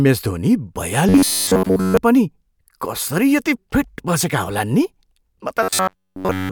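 From 1.09 to 1.97 s, and again from 5.63 to 6.51 s, the speech turns into robotic sound from repeated short buffers. A rigid metallic buzz fixed at 93.8 Hz appears, likely from a slice of about 10.7 ms being looped while fresh audio is skipped. Unlike dropouts, nothing goes silent.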